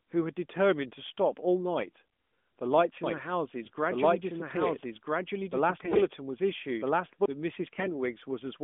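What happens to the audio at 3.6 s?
AMR bit errors hit from 3.62 to 3.70 s, a burst of roughly 80 ms that fits a handful of corrupted 20 ms frames. Bits in the less protected parts of each frame arrived flipped, at a rate of several percent, while the check on the core bits still passed, so the decoder ran with them. The excitation pulses land in the wrong places and the fine pitch, gain and spectral values drift, so the voice keeps its rough pitch and loudness but turns briefly hoarse, scratchy and gargly, all within the narrow mobile band of the AMR-NB call.

A doubled audio track is also running at that moment, from 3.04 to 7.26 s. A second copy of the full-band audio trails the original by about a second and a half at about the same level. It has no decay or room colouring, so it is heard as a clean, separate repeat. It starts abruptly at 3.04 s and stops abruptly at 7.26 s. The likely cause is the same signal being picked up again through a slower path.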